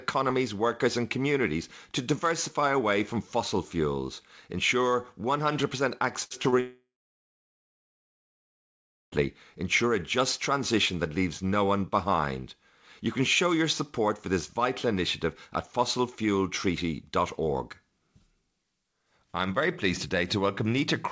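A speech recording that begins to break up just after six seconds. From 6.24 to 6.32 s the last sound is briefly held and fades before the audio resumes. This is a burst of packet loss: about 60 ms went missing, and the receiver stretched the last sound to cover it. At 6.42–6.46 s and again at 6.50–6.54 s there are quick smears or wobbles. Each is a short concealed packet loss, where roughly 20 ms never arrived and was patched by continuing the preceding sound. From 6.60 to 9.14 s the last sound fades and gives way to about 2.3 s of silence, and the audio then returns later in the speech. This is most likely a long network dropout, with some 2.5 s of audio lost outright. Throughout, nothing is heard above 8 kHz, as expected from the wideband G.722 call codec.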